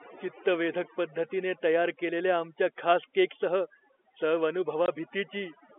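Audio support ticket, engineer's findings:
Overdone noise removal, whole clip. Background drops, with twinkling specks. Probable component: noise suppressor set too strong. It cuts bands near its noise estimate and takes quiet speech detail with them.

Packet loss filled with silence, 4.86–4.88 s. Hard 20 ms gap. Points to one lost packet at a 20 ms packet size. Receiver played silence instead of concealing it. G.711 telephone band sounds intact around it.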